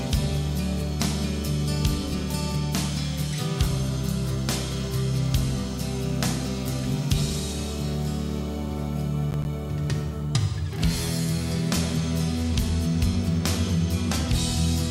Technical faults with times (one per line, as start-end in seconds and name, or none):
9.31-9.45 processor overload crackle